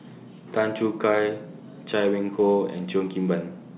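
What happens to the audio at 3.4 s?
Nothing goes wrong at 3.4 s: the speech continues intact through that moment, carried over the call path with its narrowband G.711 sound, with nothing above 4 kHz.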